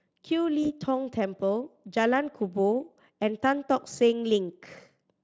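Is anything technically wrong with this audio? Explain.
Yes. At about 0.63 s a VoIP packet was lost, roughly one 20 ms frame, and the speech codec's concealment extrapolated the previous sound, leaving a brief stretched, weakened smear that lasts until about 0.67 s.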